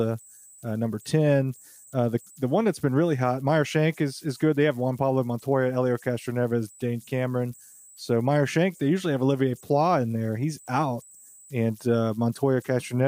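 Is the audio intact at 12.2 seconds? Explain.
No, converter idle tones persist throughout: an undithered delta-sigma converter cycles bit patterns, whistling near 7 kHz at about -30 dB, a thin horizontal line on a spectrogram.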